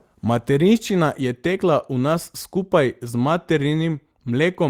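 No audible faults turn up anywhere in the recording: no dropouts, glitches or distortion events to report.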